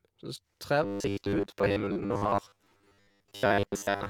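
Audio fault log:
0.83–4.09 s, robotic sound from repeated short buffers: the speech turns into a stiff metallic buzz at 100 Hz that still loosely tracks the words. Likely new audio arrived too slowly, so a 10 ms chunk kept looping while most of the real signal got skipped.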